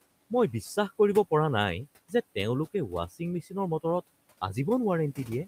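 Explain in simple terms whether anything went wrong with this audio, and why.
Between 3.42 and 3.53 seconds, the speech briefly goes faint and sounds swallowed for about a tenth of a second. This is speech cut by the noise suppressor: the filter meant to remove the faint room noise mistook that bit of speech for background and turned it down too.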